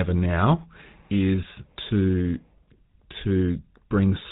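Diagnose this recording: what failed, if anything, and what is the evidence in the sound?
The speech passed through the GSM full-rate codec at the codec stage, which fits the 13 kbps full-rate coder. It rebuilds the voice from a vocal-tract filter driven by sparse regular pulses. That leaves nothing above 4 kHz and a plainly audible buzzy, gravelly roughness throughout.

GSM bit errors on the network link corrupted the decoder's filter, pitch or gain parameters from 1.43 to 1.46 s. With those values wrong, the spectrum and level are briefly misshaped, so the speech breaks into a short gargling squawk that fits a few consecutive damaged frames.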